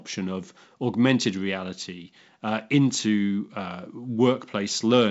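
Nothing goes wrong anywhere in this bit of speech; it's just carried over G.722 wideband telephone coding at 64 kbit/s, so the sound tops out around 7.7 kHz and shows at most a faint trace of the codec.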